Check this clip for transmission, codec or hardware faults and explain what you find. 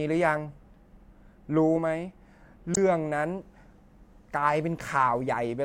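There's one fault here: a corrupt frame decoded, from about 2.74 to 2.77 s in the speech. A couple of compressed frames arrived with flipped bits, and the decoder played them instead of concealing them. The misread codes and gains pushed energy into the wrong frequencies for about 30 ms, so you hear a short chirp, blip or burst of noise that doesn't belong to the speech around it. It's fairly loud, peaking somewhere around -10 dBFS.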